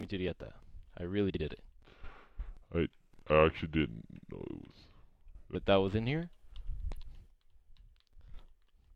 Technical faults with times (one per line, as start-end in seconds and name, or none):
1.29-1.40 frames out of order
1.79-5.55 section at the wrong speed
6.93-7.04 frames out of order